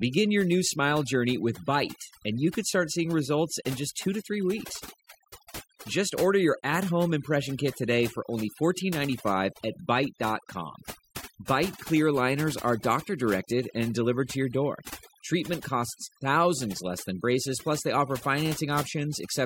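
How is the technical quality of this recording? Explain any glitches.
The recording is marred by overdone noise removal, present from start to finish. A noise reduction process was set far too strong. It pushes individual frequency bands down or out whenever they sit close to its noise estimate. Quiet parts of the speech get caught and removed along with the noise. The background drops, broken by twinkling specks.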